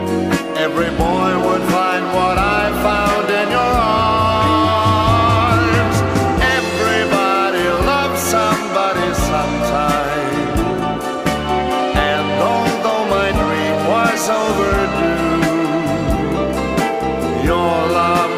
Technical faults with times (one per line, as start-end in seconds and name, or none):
none